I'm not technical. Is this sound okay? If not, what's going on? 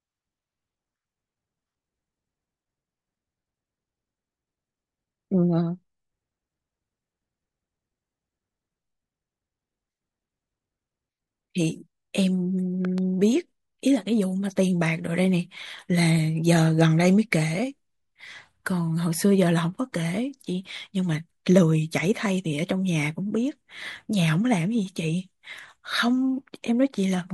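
No. At about 12.85 seconds, something in the recording chain most likely got a sudden jolt of electricity, such as a plug being moved, a switch being flicked, a spark of static or a brief hiccup in the audio hardware. That jolt gets mixed straight into the recording, and you hear it as a loud pop: two sharp pops in quick succession, over by 13.0 seconds, noticeably louder than the speech itself, while the talking carries on underneath without stopping.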